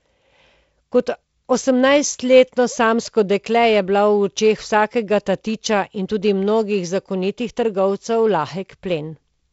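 No technical faults occur at any point in this speech, so there is nothing to place in time order.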